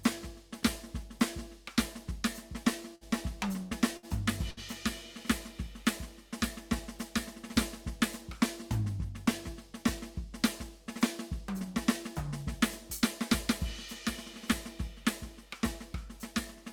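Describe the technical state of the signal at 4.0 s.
Right around 4.0 s there's a burst of packet loss, from 3.97 to 4.06 s. The receiver stretches the last bit of music for roughly 58 ms, letting it fade down, then skips ahead, so about 60 ms of the music never gets played.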